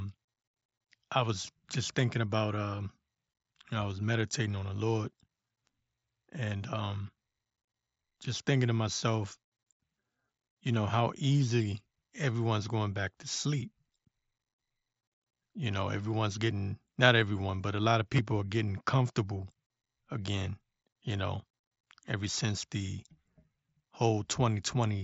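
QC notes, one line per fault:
18.16–18.19 s, concealed Bluetooth headset packet loss: about 22.5 ms of headset audio dropped after "but a lot of", refilled from preceding waveform, leaving a brief buzzy hold and small warble.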